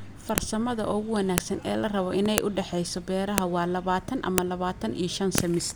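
Speech with a file header played as audio: sharp clicks at 0.38, 1.38, 2.38, 3.38, 4.38 and 5.38 s, one per second regardless of the signal. The audio was joined from 1 s WAV pieces whose header bytes were left in and played back as samples.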